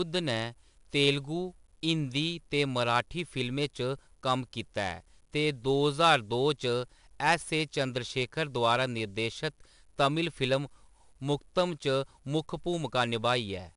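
Gritty hiss rides every loud syllable throughout, with nothing above 10.6 kHz: 4-bit ADPCM compression, coarse prediction steps adding level-following noise, fitting an 88 kbps stream.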